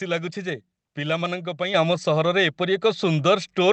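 Speech clip passed through an Opus call path whose audio tops out at 8 kHz, with two kinds of fault. At 1.74 s the microphone volume steps up: the call software judged the input too quiet and raised the device gain in one jump of about 6 dB, so the voice and the background noise both get louder at once and stay there. Shortly after, lost packets are rebuilt from error correction at 1.91 s, 2.01 s and 2.23 s. In each case a 20 ms packet went missing, and the decoder filled it from the low-bitrate copy carried in the following packet, so there is no dropout. Instead, each spot has a brief patch of rougher, noisier texture. Because the stream is already limited to 8 kHz, the rebuilt frames lose no extra treble. The third patch runs slightly longer, about 6 ms beyond the rebuilt frame, from 2.23 to 2.26 s.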